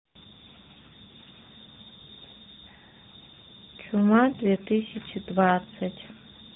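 Speech throughout shows tandem speech coding: rougher, more muffled and warblier than any single narrowband codec, nothing above 3.8 kHz, which fits three successive coders ending in AMR-NB.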